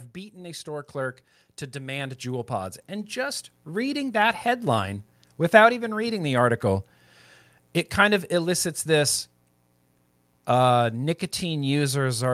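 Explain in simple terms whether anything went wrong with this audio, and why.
Something did go wrong: automatic gain rising. From 0.33 to 4.1 seconds the recording level climbs steadily as the device boosts what it took to be too quiet an input. Unlike a speaker leaning closer, the background noise swells along with the speech.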